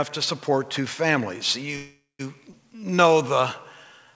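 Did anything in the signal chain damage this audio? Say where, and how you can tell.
Yes, at the network and jitter-buffer stage. A call audio freeze from 1.76 to 2.21 s was likely caused by delayed packets draining the buffer. The last sound is stretched into a fading buzz that reaches about 180 ms of silence, then resumes with nothing lost.

A skip ahead at 2.51 to 2.54 s comes from about 150 ms of audio being dropped, with later packets already queued. Playback jumps forward almost seamlessly, with that stretch gone.

A jitter buffer slow-down from 2.71 to 3.41 s is the buffer rebuilding its reserve by repeating pitch periods. The sound plays at 91% speed, adding 69 ms, with the same pitch and drawn-out sounds. The G.722 call path leaves nothing above 8 kHz.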